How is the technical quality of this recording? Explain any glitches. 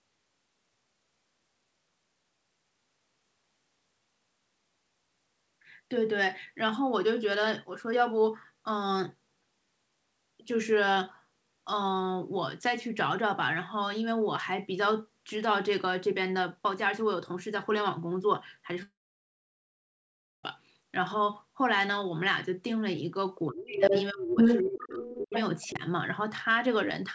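The recording has clear faults late on. It is speech band-limited to 8 kHz, which fits a wideband call codec such as G.722.

Long network dropout, 18.83–20.44 s: a brief fading buzz, then about 1.5 s of flat silence, likely from lost packets. The waveform flatlines and the spectrogram goes blank.

Speech suppressed in double talk, at 23.48–23.93, 24.11–24.38, 24.62–25.33 and 25.71–25.82 s: the voice dips, by up to about 30 dB. This is likely an echo canceller ducking during overlap, and it shows as notches in the envelope.

Other side's voice leaking through, at 23.80–24.06, 24.37–25.41 and 25.61–25.69 s: a second voice appears, likely leftover loudspeaker echo. It is mostly about 5 dB above the talker, with extra harmonic traces on the spectrogram.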